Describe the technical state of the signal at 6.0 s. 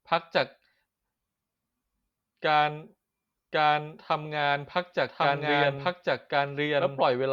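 At 6.0 s the speech carries a doubled audio track, running from 3.53 s to the end. A second full-band copy trails by about one second at roughly equal level, dry and without room colour, likely from a slower capture path or an out-of-step edit.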